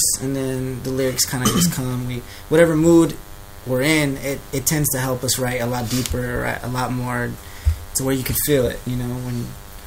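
DECT cordless phone buzz runs through the whole clip. A nearby cordless handset or base transmits a radio burst every 10 ms, which the audio circuitry rectifies into a steady, thin 100 Hz buzz rich in harmonics, sitting roughly 25 dB below the sound.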